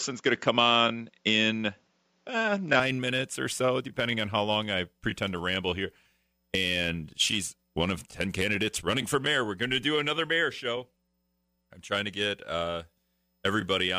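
From the start to 2.80 s the speech is band-limited, with nothing above 7.6 kHz, a level about 5 dB different and faint added noise, most likely an input switched to a poorer device. It clears abruptly, with no gap, just before "minutes or so depending".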